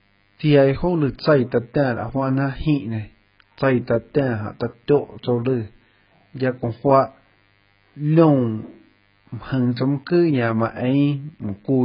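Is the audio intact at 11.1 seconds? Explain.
No. Mains buzz runs through 11.1 seconds and the whole clip: switching spikes on the 50 Hz supply add a faint, raspy harmonic buzz well below the speech. AAC compression damage is also present throughout. Nothing survives above 5.1 kHz, and the dull, smeared, warbling texture likely comes from heavy AAC-LC coding at a very low bitrate, around 12 kbps.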